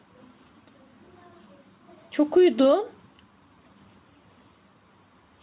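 All the way through, the level keeps pumping, a swing of around 5 dB. That's gain pumping, and the likely cause is the input gain set far too high with a fast limiter or compressor clamping down on every peak. Loud and quiet parts end up squeezed together, so it all sounds flattened, on top of a band that stops at 4 kHz, which fits G.711 mu-law at 64 kbps.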